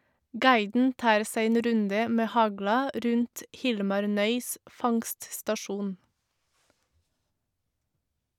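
Speech recording with no technical faults to report.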